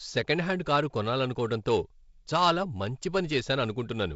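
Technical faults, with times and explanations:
No technical faults turn up anywhere in this speech; it just carries the light hiss and the missing top end above about 7.7 kHz you'd expect from G.722 wideband telephone coding at 48 kbit/s.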